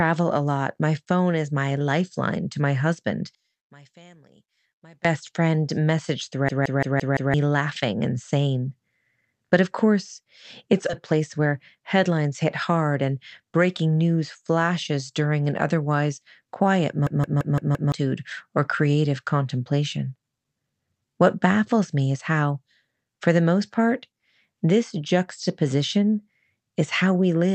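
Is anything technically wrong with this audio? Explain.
Yes, there are four kinds of fault.

From 3.35 to 5.05 s, between "lifeline to my husband" and "friend message", the level collapses by about 29 dB but a faint residue remains. The likely cause is one channel inverted, so the shared centre cancels in mono. A true dropout would leave silence.

At 6.49 to 7.34 s, after "friend message" and before "laughing and sane", and again at 17.07 to 17.92 s, there is a system hang loop. A 171 ms slice repeats exactly five times, a 5.86 Hz stutter that fits an 8192-sample buffer, and about a second of audio is lost each time. The identical repeats set it apart from a skip.

At 10.89 s, right after "of course it's", playback skips ahead. Roughly 0.4 s is gone and the two sides join with no gap, unlike a dropout.

From 11.13 to 12.45 s, a jitter buffer speed-up trims short pitch-period pieces, about 0.1 s in total. 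The speech runs 8% faster and sounds hurried, but the pitch stays unchanged, unlike a resampling error.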